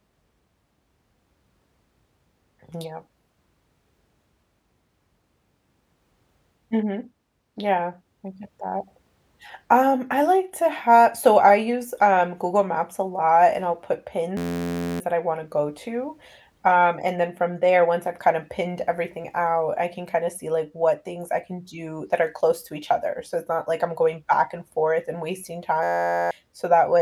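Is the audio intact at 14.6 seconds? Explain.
No. From 14.37 to 15.0 s a system hang loop repeats one 11.61 ms buffer, fitting 512 samples, producing a steady 86.1 Hz buzz.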